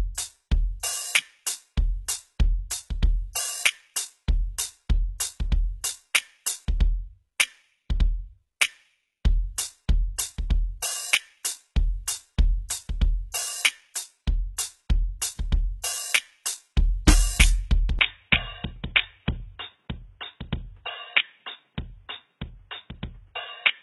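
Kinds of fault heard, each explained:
HE-AAC compression: the music's treble sounds gritty and metallic and stops near 11.8 kHz, likely from band replication rebuilding it from copied lower bands.
Input switched to a poorer device: from 17.99 s the music turns dull and boxy, cut near 3.8 kHz, about 5 dB quieter, likely a lower-grade input taking over.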